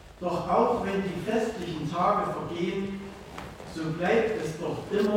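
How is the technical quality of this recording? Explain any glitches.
No glitches can be heard anywhere in the recording, and the signal holds steady and continuous throughout.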